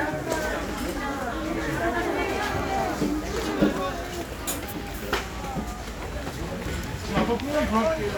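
Everyday sound recording, with no audible technical faults anywhere in the clip.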